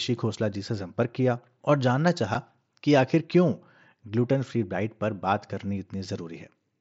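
A speech clip carried over an mSBC wideband Bluetooth headset link. At about 2.34 s there's a tiny hole with hard edges, unconcealed Bluetooth headset packet loss, roughly 7.5 ms long, which fits a single dropped voice frame replaced by silence.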